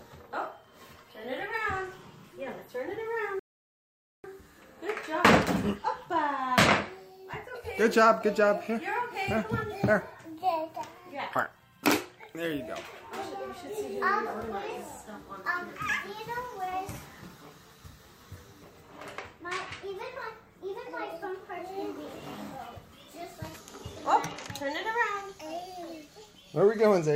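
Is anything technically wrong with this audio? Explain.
Yes, there is a rebuffering stall from 3.39 to 4.24 s. Playback ran dry and paused, adding about 0.85 s of silence, then resumed exactly where it stopped. On a waveform it shows as a flat gap, and on a spectrogram as a blank band.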